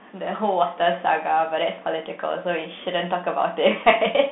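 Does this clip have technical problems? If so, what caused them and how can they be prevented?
Yes. Throughout the speech, the Bluetooth CVSD headset codec is plainly audible. The band runs only from 150 Hz to 3.6 kHz. The one-bit delta steps fall behind loud high sounds, so s sounds turn scratchy, and a granular hiss sits underneath, which fits a 64 kbps CVSD link. It can be prevented by recording through a wired microphone or through a headset running a wideband codec such as mSBC or LC3.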